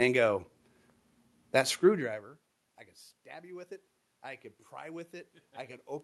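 From 3.3 s to 6.03 s, automatic gain rising follows an input drop of about 21 dB: the gain control slowly lifts the level, so speech and room noise swell together. The waveform envelope ramps steadily upward, and the spectrogram brightens evenly across all bands, noise floor included.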